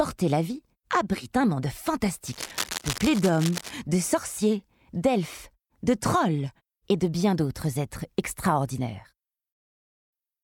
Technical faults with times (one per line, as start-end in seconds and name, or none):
2.26-3.71 cable scratch noise